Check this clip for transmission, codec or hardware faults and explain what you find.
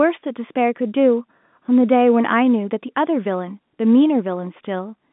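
No transmission, codec or hardware faults are present; the speech arrives through an ordinary G.711 A-law telephone path at 64 kbps, limited to a line band of about 150 Hz to 3.6 kHz with nothing above 3.8 kHz.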